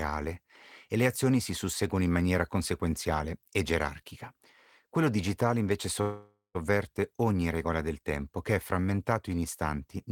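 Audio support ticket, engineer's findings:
Call audio freeze in the speech at 6.01 to 6.57 s, right after "digitale invece". The last sound gets stretched into a fading buzz or hiss, then about 180 ms of silence, and the speech picks up exactly where it left off with nothing lost. Likely the jitter buffer running dry while packets were held up in transit. The filler is roughly 0.53 s long, and every word after it arrives that much later.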